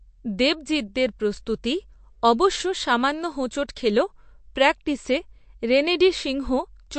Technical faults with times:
0.00-6.99 MP3 compression

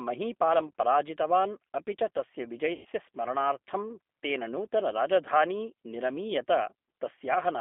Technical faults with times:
0.00-7.61 G.729 codec
2.73-2.87 VoIP packet loss concealed by the speech codec

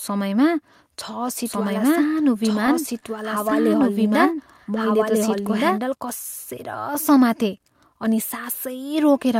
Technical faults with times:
1.46-5.78 doubled audio track
2.35-3.05 repeated stalls (stutter)
3.50-4.12 repeated stalls (stutter)

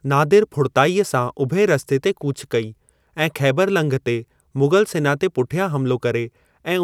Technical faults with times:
none

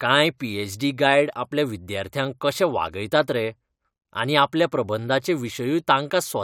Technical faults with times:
none

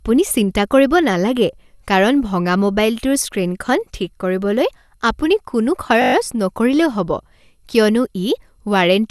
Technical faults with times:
0.00-9.11 generation loss
6.02-6.14 system hang loop

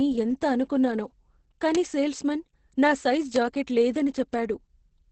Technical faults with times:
0.00-5.12 Opus voice compression
1.75 bit error spike
3.36 bit error spike
4.34 bit error spike

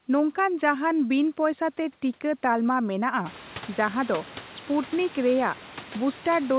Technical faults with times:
none

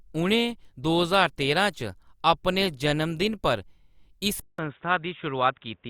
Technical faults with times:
4.40-5.89 input switched to a poorer device

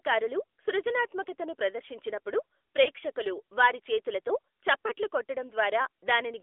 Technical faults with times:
0.00-6.43 AMR narrowband mobile codec
2.84-2.88 lost AMR speech frames
4.88-4.92 lost AMR speech frames

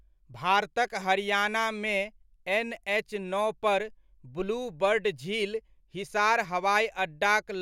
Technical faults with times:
none

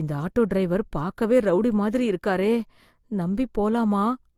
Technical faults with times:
0.00-4.37 transcoding between lossy codecs

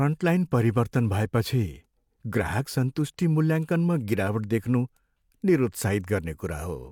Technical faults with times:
none

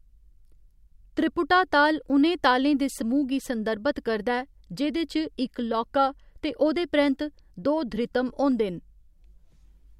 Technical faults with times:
none

